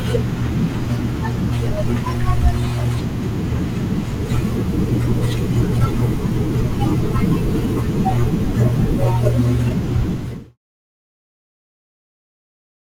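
No technical faults are audible in this speech clip, and the smooth fade-out that begins around 10 s and completes at 10.58 s is a deliberate edit.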